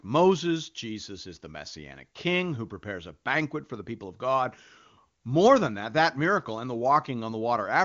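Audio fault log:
No faults heard in this speech clip, which carries the band limit around 7 kHz and the noise-filled band from 6.4 to 7 kHz of AMR wideband (HD Voice) coding at what sounds like one of its higher rates.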